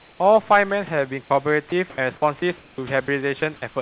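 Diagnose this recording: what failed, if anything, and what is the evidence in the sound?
Comfort noise in place of the background, 0.0 to 0.2 s: in call processing, steady featureless hiss about 3 dB quieter replaces the real room tone, likely from discontinuous transmission.

Sound dropped by the voice detector, 1.24 to 1.3 s and 3.06 to 3.08 s: brief speech fragments vanish into flat noise, likely because the sender's detector misjudged part of the speech as background.

Sound chopped by the voice detector, 1.7 to 1.98 s, 2.4 to 2.78 s and 3.4 to 3.62 s: speech turns choppy, likely from the detector repeatedly toggling transmission.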